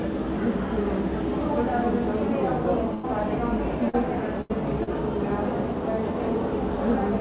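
At 2.94 to 3.05 s, a burst of packet loss: about 100 ms of audio never arrived, so the receiver stretched the last sound for 94 ms and faded it. It becomes a held, dying tail before the sound resumes with a section missing.

At 3.89 to 3.95 s, a short concealed packet loss: 40 ms failed to reach the decoder in time and was patched with 38 ms of extrapolated sound, heard as a brief smear before blending back.

At 4.41 to 4.51 s, a second burst of packet loss: 80 ms went missing and 82 ms of decaying continuation covers it, giving another fading hold and a small jump forward.

At 4.83 to 4.89 s, a second short concealed packet loss: 20 ms was lost and covered by a 34 ms fill, a quick wobble through the narrowband G.711 A-law call audio, which has nothing above 4 kHz.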